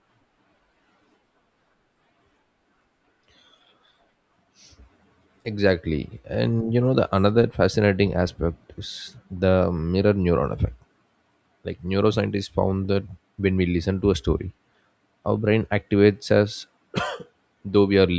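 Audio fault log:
No fault is heard in this speech clip.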